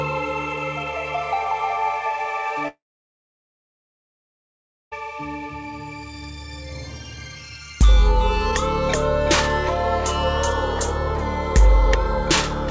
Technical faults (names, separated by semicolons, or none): long network dropout